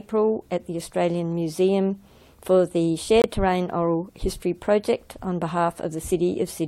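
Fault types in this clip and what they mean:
Corrupt frame muted: damaged bits in a compressed frame made the decoder reject it, and the player filled the slot with silence. Here the sound cuts off abruptly at 3.22 s and returns at 3.26 s, a clean 44 ms hole whose length fits a single codec frame. Unlike a buffer underrun or dropped packet that shifts later sound, timing is kept, and unlike loss concealment, the gap is true silence rather than a smeared or repeated fill.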